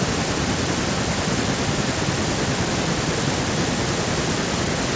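No technical faults can be heard in this recording.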